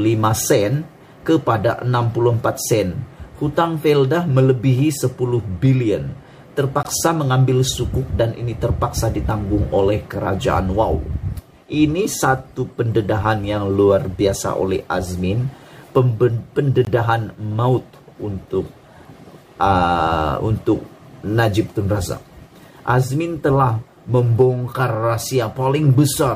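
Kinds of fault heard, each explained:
Gap between chunks: audio delivered in 10-second chunks has a 20 ms silence inserted at each join, heard as brief holes at 6.83 s and 16.85 s.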